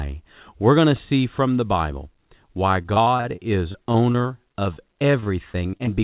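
Repeated packet loss (robotic sound) runs from 2.82 s to 6.01 s in this speech clip. Some 25 short holes, none longer than about 42 ms, are each patched by stretching the preceding sound, so roughly 15% of that span is filled-in audio, giving a choppy texture with pieces missing. The band ends sharply at 4 kHz, which fits a narrowband G.711 mu-law call path at 64 kbps.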